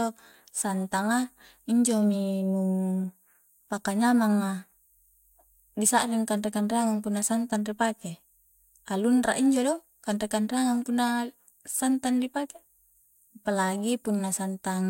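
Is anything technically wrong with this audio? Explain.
No, nothing technically wrong stood out on listening to this speech recording.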